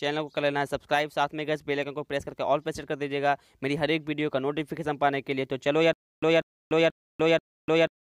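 From about 5.93 s to the end, the audio breaks into a stutter with silent gaps: the same 192 ms fragment replays four times, each followed by roughly 294 ms of dead digital silence, a steady 486 ms cycle. That's likely a stalled stream replaying its last buffer, with the real audio lost.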